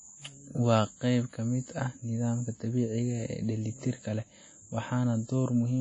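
Throughout, the speech rings and smears, with breathing hiss and nothing above 10.1 kHz. Likely WMA compression: long transform blocks at a bitrate near 32 kbps.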